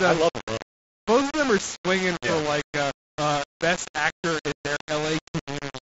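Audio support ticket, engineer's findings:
Grainy distortion through the whole clip, tracking the speech level; quiet tails sputter between steps. Likely low bit depth without dither, consistent with roughly 4-bit rounding; error sits only about ten dB under the signal. Waveform: visible staircase steps. Spectrogram: broadband grit moving with the speech energy, not a steady noise floor.

Short hole 0.58–0.60 s, after "i love them", before "both of them are": unconcealed Bluetooth headset packet loss, dropped audio replaced by silence or an idle pattern, abrupt edges. Waveform: flat gap with square edges. Spectrogram: full-height vertical blank stripe.

Second hole 4.77–4.81 s, after "uh best actor in", same mechanism. Gap length fits several lost 7.5 ms mSBC frames. Same flat gap on the waveform, blank column on the spectrogram. The mSBC link audibly caps the band near 8 kHz.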